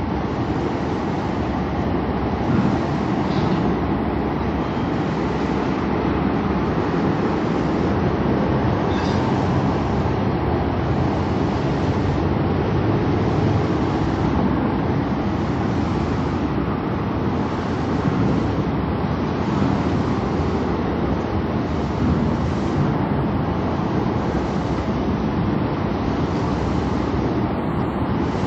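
Nothing here calls for attention; the audio runs its whole course without any technical fault to point to.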